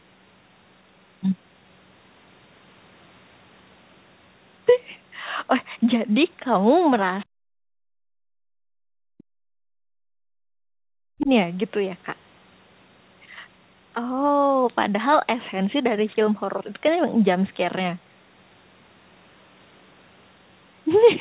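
From 7.2 to 7.25 s, a brief, very faint scrap of a second voice slips in, far below the main speech. This is likely the other side's voice leaking through: loudspeaker playback reached the microphone, and the echo canceller left a residue.

Between 7.31 and 11.3 s, the talker's speech sinks deeply, at its worst almost to silence, for roughly four seconds. This is speech suppressed in double talk. With both sides likely talking together, the canceller could not tell the talker from the echo and turned everything down. Throughout, the sound is capped at 4 kHz, as fits a narrowband telephone codec.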